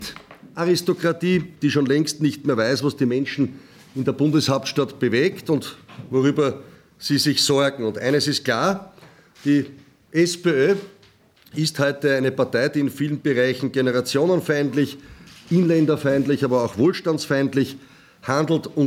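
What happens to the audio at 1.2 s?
Nothing goes wrong at 1.2 s: the audio carries on intact through that moment, with no dropout, click or other fault to be heard.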